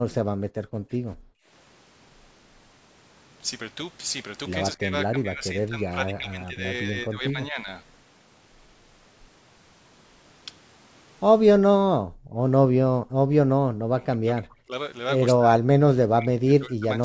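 At 0.26 to 0.58 s the room sound behind the speech is pulled down hard, by about 36 dB, then returns. This is background gated by the echo canceller: with the far end playing through the loudspeaker, the canceller clamped the microphone to keep echo out, and the ambience went with it. On a waveform the low noise floor collapses to a near-flat line. On a spectrogram the broadband haze, which stops at 8 kHz as the call path's normal band limit, shows a clean vertical gap.

The same gating returns at 1.2 to 1.48 s, about 38 dB deep.

Between 0.86 and 0.92 s the speech itself briefly dips by roughly 30 dB. This is speech suppressed in double talk, likely because both sides spoke at once and the canceller could not tell the near talker from the loudspeaker echo, so it attenuated both.

From 4.76 to 7.68 s the same suppression is longer and shallower, around 20 dB, and lasts about two seconds in patches. 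The voice sounds choppy. Its waveform envelope shows bitten-out holes.

Background gating recurs at 11.86 to 12.38 s, about 21 dB deep, and at 12.99 to 13.24 s, about 16 dB deep. These are milder, so the noise floor sags rather than vanishing.

Double-talk suppression then cuts in again, roughly 30 dB deep, at 13.88 to 14.72 s and from 15.36 s to 17.01 s. The later stretch affects about one and a half seconds of speech in broken pieces.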